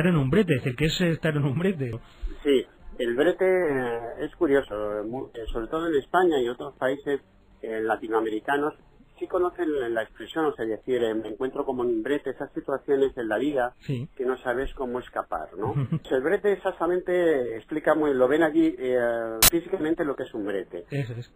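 Damaged data in a compressed stream shows up at 1.93 s, from 11.28 to 11.31 s, at 16.05 s, and from 19.11 to 19.49 s. Each time, corrupted bytes reach the decoder, which misreads or rejects the affected frames, loses sync and hunts for the next valid frame header. The first three are short. The last lasts almost 0.4 s.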